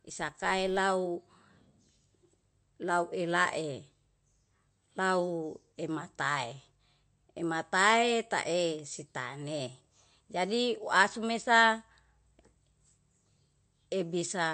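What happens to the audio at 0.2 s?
At 0.2 s a filter in the processing chain is being restarted on every block. It discards its internal state at each block boundary and begins again from silence, so every block opens with a small transient. Here those blocks arrive every 5 ms, and from 0.0 to 0.8 s the repeated transients merge into a buzz at about 200 Hz that sits on the speech and rises and falls with its level.

The same moment also carries damage that is likely from MP3 compression, present through the whole recording. The encoder appears to have been starved of bits, which fits a low bitrate of around 47 kbps. To cope, it has zeroed weak frequency lines that then switch on and off from frame to frame. The result is plainly audible: watery speech with swirling texture and smeared consonant attacks.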